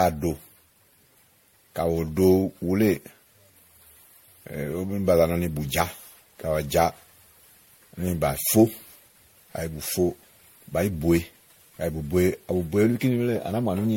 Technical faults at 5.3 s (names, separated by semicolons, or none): generation loss